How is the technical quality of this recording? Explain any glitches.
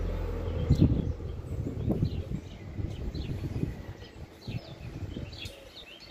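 No technical faults are audible.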